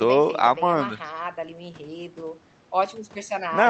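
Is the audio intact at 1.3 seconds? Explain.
Yes, the speech at 1.3 seconds is intact, with no dropout, glitch or other fault at that moment.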